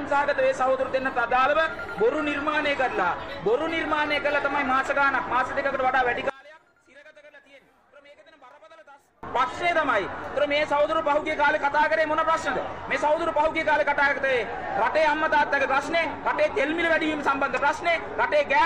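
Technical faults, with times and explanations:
6.30–9.23 s, one channel inverted: across this span the summed sound drops by about 27 dB, leaving only a faint copy. The likely cause is one stereo channel flipping polarity, so whatever the two channels share cancels when they are combined, leaving only their difference. On a waveform the envelope collapses abruptly at 6.30 s and recovers at 9.23 s; a spectrogram shows only faint residue.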